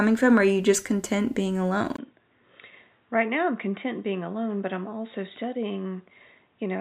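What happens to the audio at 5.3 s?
At 5.3 s the sound is still in the condition it entered at 1.96 s, just after "you just content being", and it stays that way to the end. It has turned dull and boxy, with nothing above 3.8 kHz, a level roughly 5 dB lower, and a faint new noise floor far below the signal. The likely cause is an input switched to a poorer device. A spectrogram shows a hard ceiling at 3.8 kHz, and the waveform has a brief 20 ms gap at the switch, followed by a smaller envelope.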